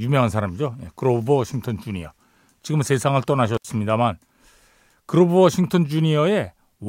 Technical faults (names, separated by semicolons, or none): intermittent contact